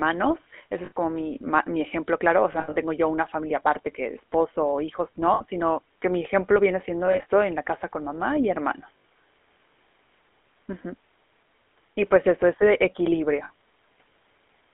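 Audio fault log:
throughout, GSM full-rate codec: the speech passes through a vocal-tract model driven by a sparse, regularly spaced pulse excitation, which fits a 13 kbps full-rate coder. This leaves a plainly audible buzzy, gravelly roughness, and a band running only from about 250 Hz to 3.4 kHz.
0.86–0.92, 2.52–2.76, 5.34–5.44, 7.06–7.26, 8.98–9.04 and 13.44–13.51 s, lost GSM frames: damaged frames were replaced by repeating the last good frame's settings. Each gap becomes a brief rough, metallic ring. Most gaps last about 60 ms. Those at 2.52 s and 7.06 s are broken into short bursts, the longest around 70 ms.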